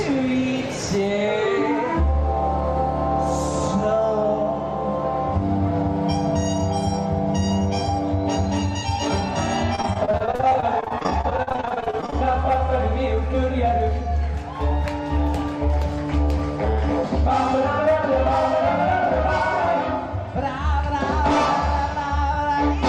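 From 9.75 to 12.16 s there is repeated packet loss with a robotic sound: dozens of short dropouts, the longest 44 ms, each patched by extending the preceding audio. About 31% of the stretch is concealed this way, leaving choppy, robotic-sounding audio with pieces missing.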